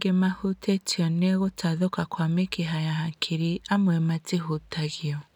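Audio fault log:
No technical fault can be heard anywhere in the speech signal.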